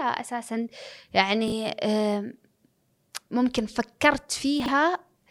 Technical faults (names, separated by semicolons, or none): chunks out of order